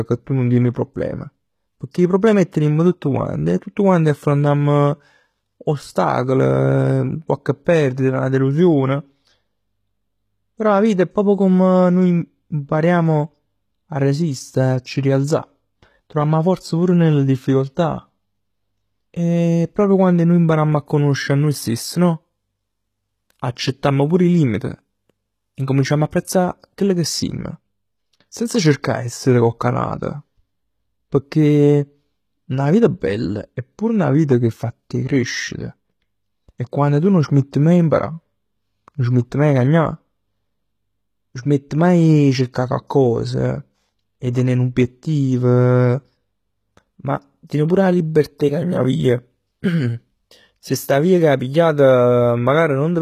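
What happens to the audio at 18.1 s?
At 18.1 s the speech carries the same coding damage heard across the whole recording. The cause is likely HE-AAC compression at a very low rate, around what a 20 kbps stream would give. Only the lower spectrum is coded directly. The treble is rebuilt by copying lower bands upward under a coarse envelope, so its harmonics don't line up with the real ones. S sounds turn gritty and lispy. Nothing is present above 14.9 kHz.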